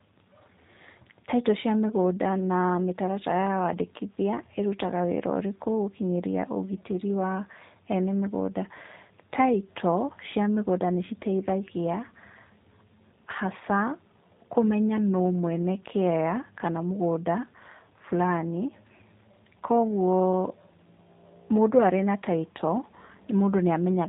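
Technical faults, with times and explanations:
Throughout, G.729 codec: the speech is rebuilt from a vocal tract model and a few pulses per frame, so it sounds rough and slightly synthetic, with nothing above 4 kHz. That buzzy, pulse-built texture, rather than a clean band limit alone, fits an 8 kbit/s G.729A coder.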